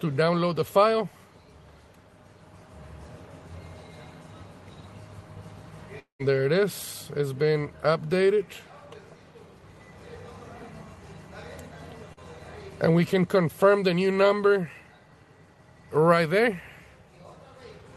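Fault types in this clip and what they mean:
Long network dropout: From 5.99 to 6.21 s, about 200 ms of audio is missing, likely because packets stopped arriving over the network. The receiver stretches the last sound into a fading buzz or hiss, then leaves about 120 ms of near silence before the audio resumes without the lost part. On a waveform the envelope decays and flattens into a near-empty gap. A spectrogram shows smeared, repeated bands thinning into a dark vertical strip.
Short concealed packet loss: Between 12.13 and 12.20 s, about 40 ms never reached the decoder in time. The receiver covered roughly 36 ms of that hole by extrapolating the preceding sound and then crossfading back into real audio, which stretches the passage by about a hundredth of a second. It is heard as a brief smear or wobble. A waveform shows a short, overly regular stretch, and a spectrogram shows a thin band of blurred, copied-looking sound.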